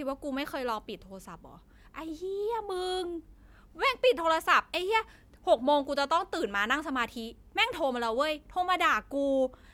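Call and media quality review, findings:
No faults found in the speech clip. Nothing to log against any component.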